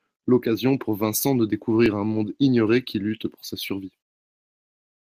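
At 1.86 s, the program likely failed to read its input buffer before the hardware overwrote it, a dropped buffer (overrun). About 10 ms of the speech is lost and the two sides are butted together, so there is a small skip forward without any silence.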